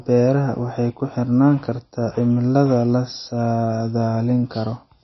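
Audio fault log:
Throughout, MP3 compression: the speech has nothing above about 5.8 kHz, so the top end stops dead, and the damage is plainly audible as a watery, swirly quality. That's likely a low-bitrate MP3 encode, roughly 25 kbps, where the encoder runs so short of bits that it chops the treble at a fixed point and drops weaker frequency lines, which then blink on and off from frame to frame.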